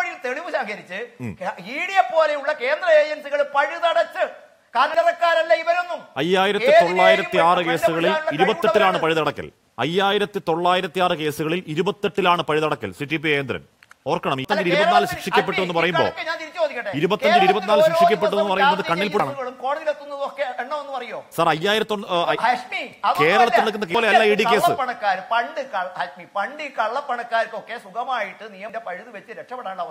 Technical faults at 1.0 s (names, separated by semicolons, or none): none